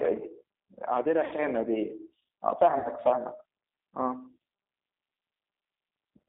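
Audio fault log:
Throughout: G.729 codec. The speech is rebuilt from a vocal tract filter, a pitch predictor and a few pulses per 5 ms subframe, which fits G.729A at 8 kbit/s. That produces a plainly audible rough, slightly synthetic quality. On a spectrogram, energy sits in a band from 250 Hz to 3.7 kHz, empty above and below. Harmonics look smeared and grainy rather than clean.
1.25–1.33 s and 2.78–2.90 s: VoIP packet loss concealed by the speech codec. About 60 ms of audio is missing in each gap, which fits two lost packets. The decoder fills each gap by repeating its last pitch and filter at falling gain. The speech therefore turns into a short stretched buzzy tone or coloured noise that fades, and it stays weak and distorted briefly after real audio resumes. On a spectrogram, the harmonics freeze flat and dim across the gap. On the waveform, the envelope decays smoothly and then recovers only gradually.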